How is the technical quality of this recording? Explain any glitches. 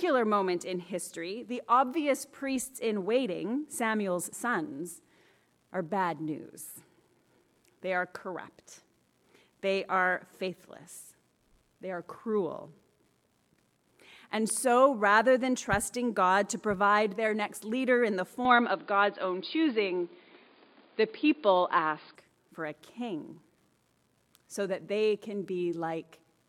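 One glitch stands out. From 18.45 to 22.15 s the sound turns dull and boxy, with nothing above 4.9 kHz, shifts in level by a few decibels, and gains a faint new noise floor well below the signal, with no silence at the switch. This is likely an input switched to a poorer device: a narrower-band microphone with its own tone and hiss.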